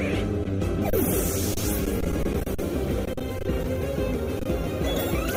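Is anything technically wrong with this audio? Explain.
Yes. Adaptive stream starting at a low bitrate, 0 to 3.87 s: the player began on a lean version to start quickly, then switched up after gauging the connection. Until then the treble is dull and coded, which fits Opus at 24 kbit/s. It then brightens abruptly with no gap, which fits 64 kbit/s.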